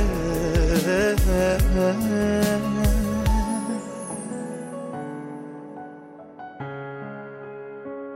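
Nothing stood out on listening to this recording.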